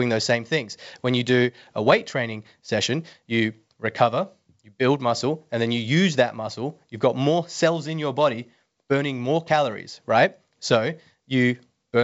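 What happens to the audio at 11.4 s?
Nothing goes wrong at 11.4 s: the speech there is intact, carried by the G.722 wideband telephone coding with its usual top limit of around 7.7 kHz.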